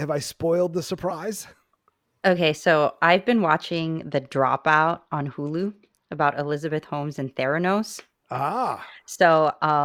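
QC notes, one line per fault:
3.72–6.26 s, Bluetooth SBC bit pool drop after "so I've been": link congestion forced coarser encoding, which points to a bit pool near 12 and roughly 96 kbps, so treble dulls and grit rises.
9.27–9.85 s, Bluetooth SBC bit pool drop: the same rate cut starves the upper sub-bands again, leaving the ending muffled and gritty until the clip stops.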